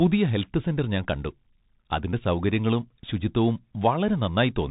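A speech recording carried throughout by a Bluetooth CVSD headset codec, with plainly audible damage. Each sample is a single up-or-down bit with an adapting step size, which fits a 64 kbit/s stream. On a spectrogram everything stops at a hard 4 kHz ceiling over a grainy noise floor. Sibilants sound scratchy, and in the waveform loud, fast transients show stair-stepped, slope-limited edges where the step can't keep pace.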